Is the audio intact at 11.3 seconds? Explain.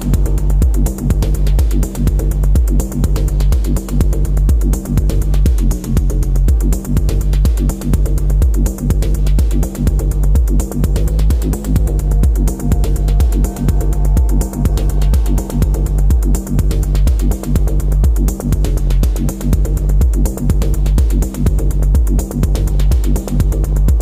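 No. From 11.00 to 11.90 s the sound plays about 6.3% fast and roughly a semitone sharp (106 cents), then snaps back. This is likely a drift correction step, where clock-matching software briefly changed the playback rate. The single abrupt shift and return sets it apart from the slow wavering of wow.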